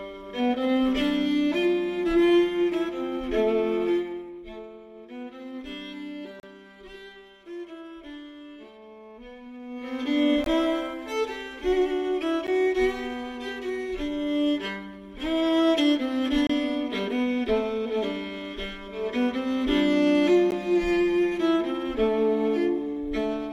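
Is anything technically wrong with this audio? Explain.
Yes. There are gaps between stream segments at 6.40–6.43 s, 10.44–10.46 s, 12.47 s, 16.47–16.50 s and 20.51 s. Segment timestamps fall on 2-second boundaries but leave 11 to 33 ms unfilled, so the player inserts silence. Each one is a brief, hard-edged dropout, and no audio is lost.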